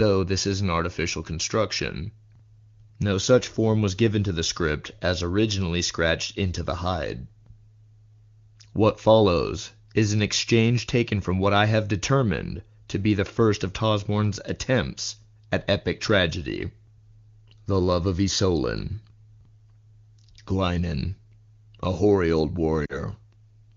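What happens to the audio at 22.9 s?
Lost AMR speech frames, from 22.85 to 22.98 s, just after "a hoary old". Frames failed their checksum, so the decoder repeated the last good pitch and vocal tract settings at falling gain. This gives a brief fade to near silence within two frames, not the hard silent gap of a plain dropout. The 40 ms of concealment fits about two frames.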